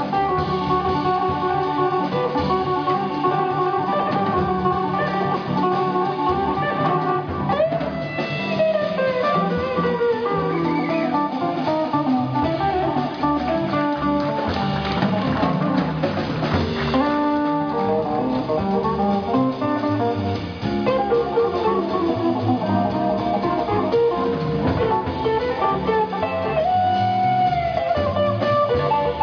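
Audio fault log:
No fault is found in this audio.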